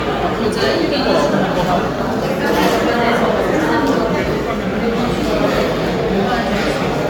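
Generation loss runs throughout this everyday-sound recording: it has a swirly, hollow, smeared character with blurred attacks and nothing above 17 kHz, most likely from repeated lossy re-encoding, around five times, consistent with AAC-LC at roughly 96 kbit/s, each pass adding fresh quantisation damage.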